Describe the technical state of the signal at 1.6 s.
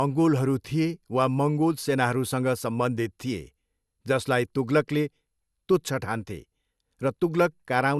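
At 1.6 s you're hearing generation loss, and it's not a local event: it runs through the whole clip. The speech sounds swirly and hollow, consonant attacks are smeared, and nothing comes through above about 12.6 kHz. That's likely the result of the audio being put through a lossy codec around three times, with each pass quantising on a shifted frame grid so the noise stacks up. The character points to MP2 at around 128 kbit/s.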